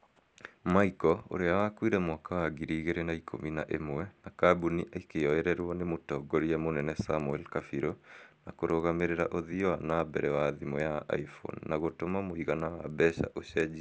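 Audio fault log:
throughout, resampler restarted on every block: each 100 ms block was converted from 48 kHz to 16 kHz in isolation, leaving edge errors heard as steady 10 Hz ticks under the speech.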